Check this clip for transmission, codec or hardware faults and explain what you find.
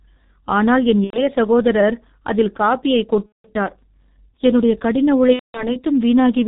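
The speech carries two faults: low-rate codec coding across the whole clip, and three dropouts covered by packet loss concealment.

The G.723.1 codec runs throughout. It codes the voice from a simple model refreshed every 30 ms and discards everything above 4 kHz. The coding damage is heavy and sounds muffled and hoarse, with smeared consonants, which fits a bitrate of about 6 kbit/s. On a spectrogram, energy stops sharply at 4 kHz, and the harmonics look blocky and coarse, changing in frame-sized steps.

VoIP packet loss concealed by the speech codec occurs three times:

1.04 to 1.25 s, between "ஆனால் என்" and "சகோதரர் அதில் காபியைக்"
3.26 to 3.51 s, right after "சகோதரர் அதில் காபியைக்"
5.33 to 5.76 s

The missing stretches correspond to about 90, 180 and 210 ms of lost audio, which fits several dropped 30 ms frames each time. The decoder filled each gap by repeating its last pitch and spectral shape at falling gain. 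The result is stretched sound that fades, then mutes from the third lost frame, and the voice stays weak for a short while afterwards. In the waveform, the envelope drops step by step and then goes silent. On a spectrogram, the frozen sound fades out.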